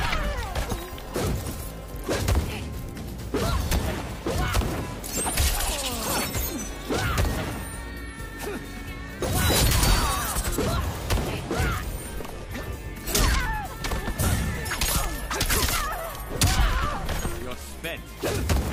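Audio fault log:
No faults detected anywhere in the audio.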